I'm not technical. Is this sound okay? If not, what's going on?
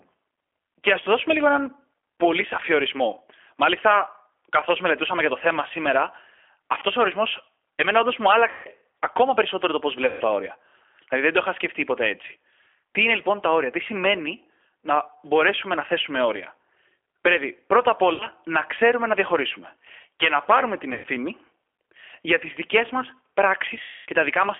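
No. Two things are wrong, and both come from the sound passing through an internet phone call.

First, the whole clip went through the G.729 codec, a speech compressor used for internet calls. It rebuilds the speech from a rough model of the voice instead of sending the sound itself. Everything above about 3.4 kHz and below about 300 Hz is gone. So the speech sounds thin and muffled, like an old phone. It also sounds slightly rough and artificial throughout.

Second, there is VoIP packet loss concealed by the speech codec. Small pieces of the call never arrived. The decoder guessed at them by stretching out the last bit of sound it had, while turning it down. Each guess turns into a buzzy or hissy smear that fades. It happens at 6.80 to 6.85 s, 8.51 to 8.68 s, 10.07 to 10.23 s, 18.14 to 18.25 s, 20.94 to 21.07 s, and 23.82 to 24.07 s. The longest gaps are near 8.5 s, 10.1 s and 23.8 s. 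Right after each gap, the speech can stay weak or distorted for a moment.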